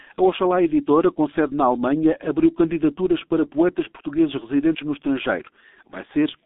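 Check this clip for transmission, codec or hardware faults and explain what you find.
The speech carries one fault, present for the whole clip: G.723.1 codec damage, heavy throughout. The audio is confined to roughly 250 Hz to 3.7 kHz, and the slow 30 ms frame updates at a rate that fits about 6 kbit/s smear consonants and leave the voice muffled and hoarse.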